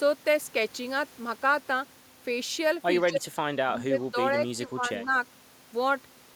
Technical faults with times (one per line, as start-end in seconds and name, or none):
3.09-3.34 speech suppressed in double talk
3.67-5.13 speech suppressed in double talk